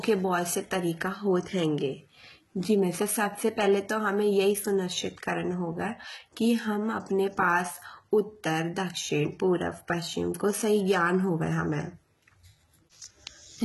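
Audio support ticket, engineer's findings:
Heavy gritty, metallic sibilance throughout. Nothing above 11.8 kHz. Likely HE-AAC compression, fitting about 16 kbps. Treble is rebuilt by band replication, so its harmonics misalign.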